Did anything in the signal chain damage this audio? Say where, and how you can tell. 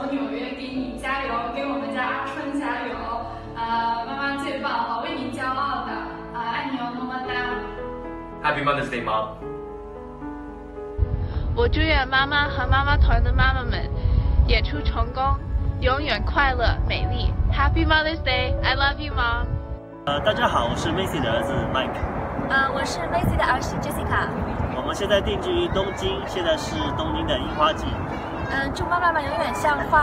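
No, nothing in the signal chain damaged this audio.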